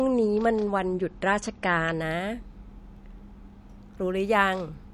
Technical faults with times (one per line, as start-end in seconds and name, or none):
0.00-2.00 adaptive stream starting at a low bitrate